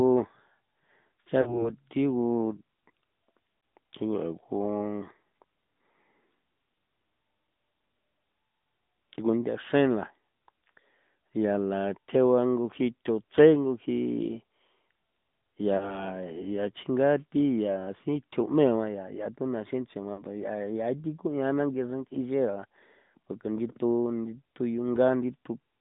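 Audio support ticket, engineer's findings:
AMR narrowband mobile codec, whole clip. Speech band-limited to roughly 150 Hz–3.7 kHz, nothing above. Plainly audible buzzy, synthetic edge from the vocal-tract model and sparse pulse excitation. Damage level fits a mid-rate AMR-NB mode around 10.2 kbps. Probable component: mobile network leg, 2G/3G voice path.

Lost AMR speech frames at 1.42–1.73 s, 3.60–3.62 s, 15.78–16.10 s and 20.14–20.23 s. Brief dips and warble as the decoder repeats the last good pitch and spectral settings at falling gain. Gaps of 20–40 ms suggest one or two dropped 20 ms frames each. Probable cause: radio bit errors failing the frame checksum.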